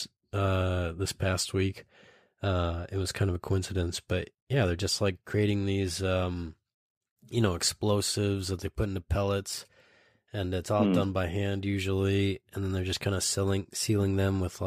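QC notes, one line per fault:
No faults found in the speech; nothing to flag.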